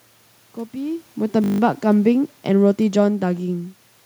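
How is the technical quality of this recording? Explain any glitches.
Two technical glitches stand out in the speech: a brief hang loop and a slow gain drop.

System hang loop, 1.44 to 1.6 s: the system stalled while the audio hardware kept replaying one 20 ms slice of its ring buffer, eight times over. At 50 repeats per second this is a short buzz, and little or no audio goes missing.

Automatic gain falling, 2.04 to 3.52 s: the automatic gain control judged the input too loud, or its background noise too strong, and gradually lowered its gain by about 3 dB. The speech and the room noise behind it sink together, which separates this from the talker's own movements near 1 s and 3.5 s.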